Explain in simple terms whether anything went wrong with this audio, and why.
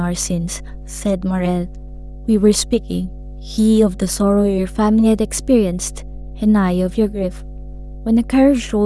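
Yes, something went wrong: a mains hum runs under the speech from start to finish. A steady low tone at 50 Hz from the electrical supply leaked into the recording, probably through a ground loop or a nearby transformer, and it sits fairly loud beneath the talking.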